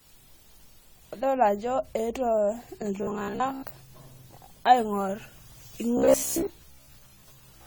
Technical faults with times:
0.00-7.66 generation loss
2.98-3.70 robotic sound from repeated short buffers
5.97-7.66 robotic sound from repeated short buffers

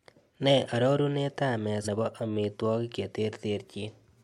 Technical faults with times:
1.84-1.88 compressed frames skipped

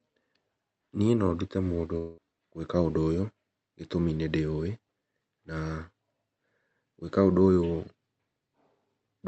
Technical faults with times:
1.97-2.19 long network dropout

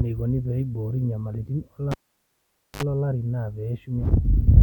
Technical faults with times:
1.91-2.83 cable pulled and plugged in

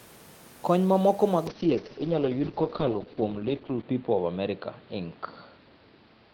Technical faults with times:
1.49-6.33 call bitrate drop

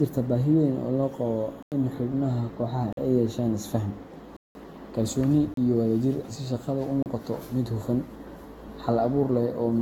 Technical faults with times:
0.00-9.81 generation loss
1.63-1.72 block of digital silence
2.93-2.97 block of digital silence
4.37-4.55 block of digital silence
5.54-5.57 block of digital silence
7.03-7.06 block of digital silence

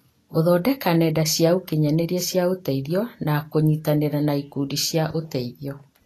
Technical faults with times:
0.00-6.06 Vorbis compression

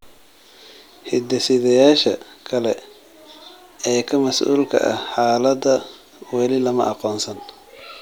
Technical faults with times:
1.45 repeated buffer

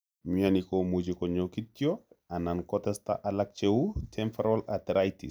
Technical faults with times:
none

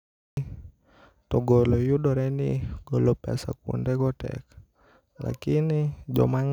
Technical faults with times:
0.00-0.37 cut-off start

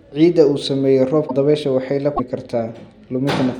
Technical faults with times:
1.27-1.31 broken MP3 bit reservoir
2.16-2.20 broken MP3 bit reservoir

